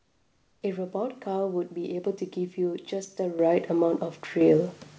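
From the start to 0.62 s, the background is a flat, featureless hiss about 6 dB quieter than the room tone that follows, sitting about 43 dB below the loudest parts. This is likely comfort noise in place of the background. During a pause, the sending side stopped transmitting, and the receiver filled the gap with synthetic noise roughly matched to the background's spectrum. The real ambience, with its texture, returns only when transmission resumes.

At 3.39 s, voice and background jump up together by about 8 dB. At 4.41 s they jump again, by about 6 dB. Both are abrupt, with no fade. These are the microphone volume stepped up: the call software judged the input too quiet and raised the device's capture gain in a single step each time. Because the gain sits before everything else, the speech and the room tone rise by the same amount, all within the G.722 call band that stops at 8 kHz.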